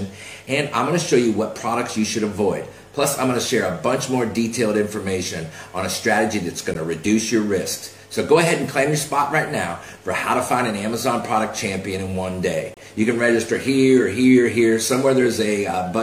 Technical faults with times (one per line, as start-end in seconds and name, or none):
6.74 gap between stream segments
12.74-12.77 gap between stream segments